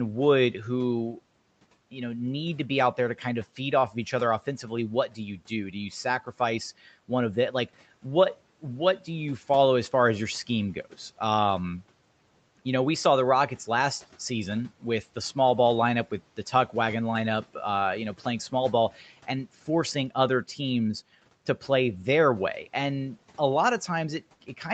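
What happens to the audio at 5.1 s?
Just after "of each other offensively", from 5.08 to 5.19 s, the speech is cut by the noise suppressor. For roughly a tenth of a second the suppressor misjudges low-level speech energy as background and pulls its gain down along with the room noise, by about 11 dB at the deepest point. The passage sounds swallowed and faint, a brief dip in presence before the level recovers at "you do".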